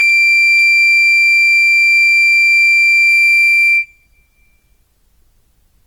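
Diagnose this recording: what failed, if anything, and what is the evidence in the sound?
The fault is in the codec stage. The music was likely put through Opus compression in its CELT mode, at a rate that points to about 24 kbps. Bit-starved bands are refilled with folded or noise content, so tones sound grainy and rough throughout, though bandwidth reaches 19 kHz.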